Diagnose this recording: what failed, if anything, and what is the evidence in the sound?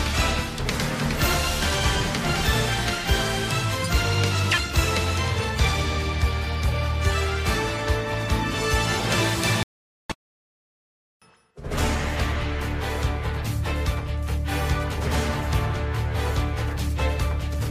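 The failure sits at the playback stage, and a playback stall is the likely cause: the player either ran short of data or had its thread held up, so it produced nothing until it caught up. In the sound, the audio cuts off in mid-flow at 9.63 s and stays silent until 10.10 s, a gap of about 470 ms, before carrying on. That abrupt break in the sound is the evidence of a starved or blocked output path.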